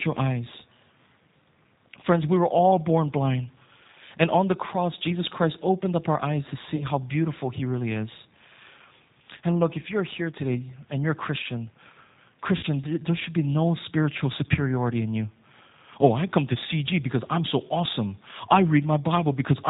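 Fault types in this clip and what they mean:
G.729 codec: The whole recording of speech carries the sound of the G.729 codec, a narrowband VoIP coder at 8 kbit/s that models the signal as a vocal tract filter driven by a pitch predictor and a sparse set of pulses. Nothing above 4 kHz survives, so sibilants are dull and the top end is missing. The coding damage is plainly audible as a rough, slightly synthetic texture on every syllable.
VoIP packet loss concealed by the speech codec: Two gaps in the packet stream were bridged by the decoder repeating its last pitch and filter state at falling gain. The first, about 40 ms of lost audio around 6.76 to 6.85 s between "up our eyes to" and "how beautiful", is briefly stretched over by the decoder. The second, about 60 ms around 12.57 to 12.66 s just before "there should be no", is longer and fades further before the speech recovers.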